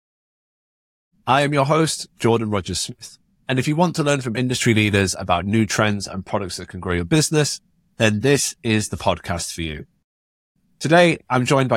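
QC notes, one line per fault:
No faults found; the speech opens on a smooth fade-in from around 1 s that settles by 1.16 s, with no click or hard edge.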